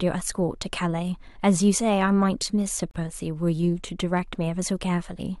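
At 2.91 s the speech drops out for about 40 ms, ending at 2.95 s. The edges are smeared by the codec, and the sound resumes where it stopped. This is a gap at a join of encoded pieces. The audio was encoded in separate pieces that were joined without trimming, so one run's padded final frame and the next run's start-up delay both remain as silence at the seam.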